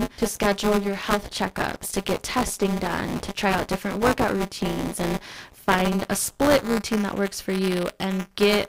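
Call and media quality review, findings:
Robotic 200 Hz buzz under speech throughout. Buffer tearing: write and read pointers cross every 5 ms, splicing in a small slice of older audio.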